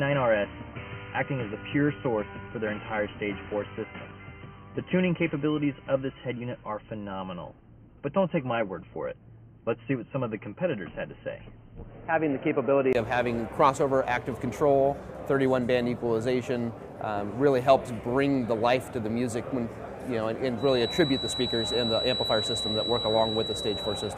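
From the start to 12.95 s, the input was likely switched to a poorer device: a narrower-band microphone or a headset call path was feeding the recording. Nothing comes through above 3.1 kHz, so the sound is dull and boxy, with a very faint added noise floor. At 12.95 s, after a brief gap of about 20 ms, the full bandwidth returns and the sound clears up at much the same level.

From 20.55 s to the end, a feedback whistle sits behind the sound. The loudspeaker-to-microphone loop is likely hovering right at its feedback threshold, so a single tone at 3.9 kHz keeps ringing without running away. It is heard as a thin whistle at one steady pitch that swells and fades slowly and sits only a little below the main sound.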